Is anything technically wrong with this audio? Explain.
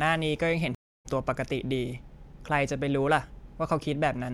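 Yes. A stream reconnect runs from 0.75 to 1.06 s. The connection dropped, so the player went silent, re-established the link and started a fresh decoder partway through the stream. The speech stops dead for about 0.30 s. When it resumes, it picks up at a point roughly 0.15 s later than where it broke off, so a short piece of the speech is skipped. The first moments after the gap come in muted or faded up.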